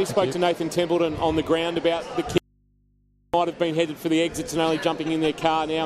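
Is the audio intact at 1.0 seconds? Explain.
Yes, the audio is intact at 1.0 seconds, with no dropout, glitch or other fault audible at that moment.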